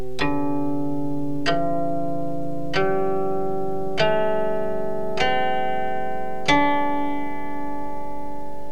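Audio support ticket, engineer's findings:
No faults heard anywhere in the clip, so there's nothing to flag on this one.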